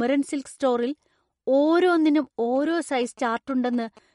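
Speech, likely squeezed through an MP3 encoder starved of bits, has everything above 11.2 kHz missing, plainly audible watery swirling as weak frequency lines flicker between frames, and smeared consonant attacks, which points to a bitrate somewhere near 47 kbps. From 2.56 to 3.99 s, GSM signalling bursts from a nearby 2G phone get rectified by the audio circuitry, adding a galloping dit-dit-dit of short 217 Hz buzzes that sit roughly 25 dB below the speech.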